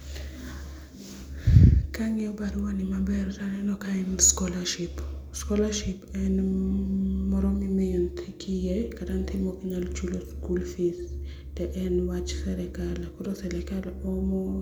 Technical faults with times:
none

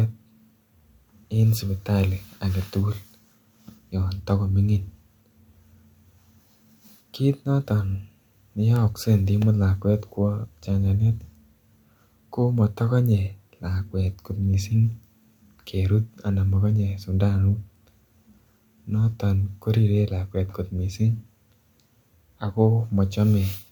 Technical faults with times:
2.00 bit error spike
8.76 bit error spike

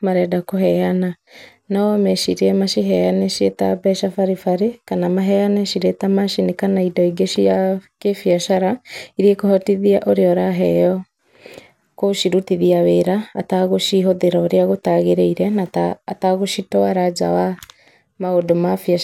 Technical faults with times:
none

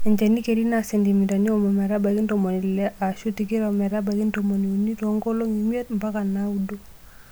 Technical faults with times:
none

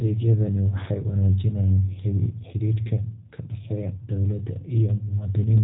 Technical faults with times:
0.00-5.64 G.729 codec

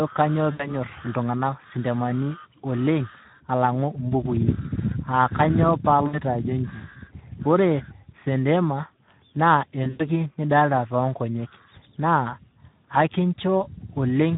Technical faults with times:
0.00-14.37 Speex codec
0.51-0.73 VoIP packet loss concealed by the speech codec
6.07-6.18 VoIP packet loss concealed by the speech codec
9.83-10.09 VoIP packet loss concealed by the speech codec

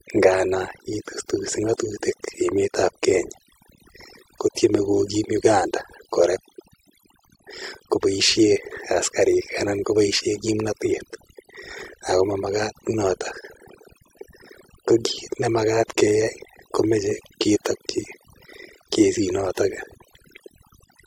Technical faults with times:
0.00-21.06 overdone noise removal

